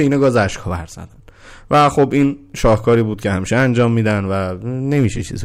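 Hard clipping hits the speech at 0.0–0.43, 1.73–2.25, 2.64–3.01, 3.53–4.0 and 4.92–5.06 s. Peaks overshoot the stage by about 2 to 8 dB, worst at 1.73 s, and are sliced flat into crackly fuzz. Unlike gentle saturation, the edges are abrupt and bright.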